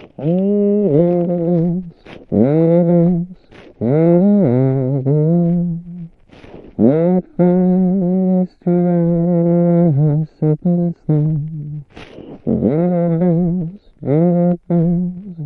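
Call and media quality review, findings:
No audible faults found in this everyday-sound recording.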